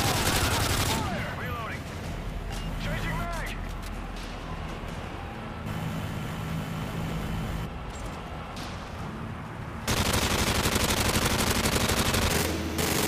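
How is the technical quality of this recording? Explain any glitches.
The main problem sits right at the end: from about 12.30 s to 13.08 s the audio is read two samples at a time, so it plays at double speed. The reader is treating each pair of samples as one frame, as if it expected two channels or wider samples. That last stretch runs twice as fast and jumps an octave up.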